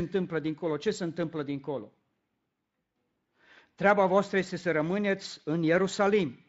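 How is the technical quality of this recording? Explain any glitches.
The technical quality holds up, with no glitches to explain in this recording.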